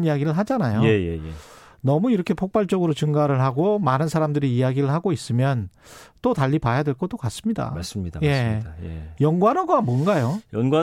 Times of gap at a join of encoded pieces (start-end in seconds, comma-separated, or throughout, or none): none